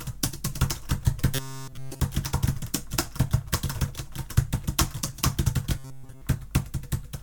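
Robotic sound from repeated short buffers hits this music from 1.35 to 2.00 s and again from 5.78 to 6.22 s. Each time a rigid, metallic buzz at 133 Hz takes over the sound, likely because a roughly 7.5 ms buffer keeps looping while new audio fails to arrive.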